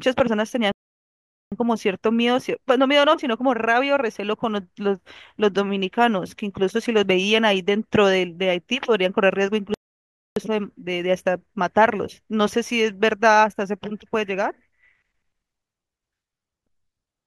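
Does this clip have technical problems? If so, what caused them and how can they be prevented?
Yes, two playback stalls: the speech goes silent from 0.72 to 1.52 s (0.8 s) and from 9.74 to 10.36 s (0.62 s). The likely cause is the player running out of buffered data. After each stall the speech carries on. Larger playback buffers prevent this.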